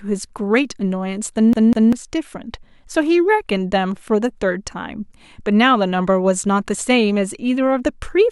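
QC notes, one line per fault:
1.53–1.93 s, CD stuck on one turn: a single 0.2 s slice of the speech plays, then plays again once more, the restart preceded by a brief mute, giving a quick, regular stutter. The loop length of about 196 ms matches one rotation of the disc, the signature of a scratch kicking the laser back one track at the same point every turn until it finally tracks past the damage.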